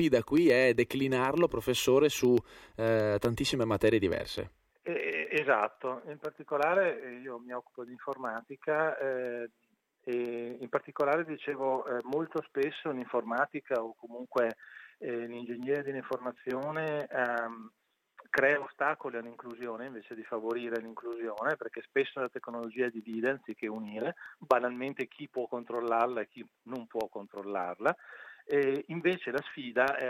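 Periodic USB or driver dropouts run from 0.12 s to 30.0 s, one every 0.125 s, or eight per second, about two hundred in all. Each time, something stalls the USB link or audio driver briefly, and a tiny fraction of a millisecond of audio is lost and replaced by silence. These gaps are heard as a steady ticking woven into the sound, audible only while signal is present.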